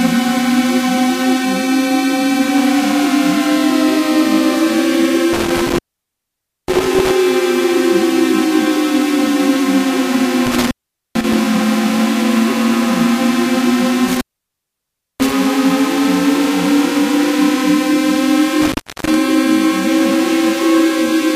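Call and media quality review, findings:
Audio drops out with crackle at each edge at 5.33–7.11 s, 10.46–11.34 s, 14.08–15.32 s and 18.61–19.15 s; line open roughly 0.90 s, 0.44 s, 0.99 s and 0.32 s. Intermittent contact: loose cable or plug briefly breaking the signal path.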